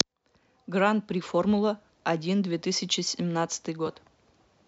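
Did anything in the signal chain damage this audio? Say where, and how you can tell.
No, no signal-chain damage heard.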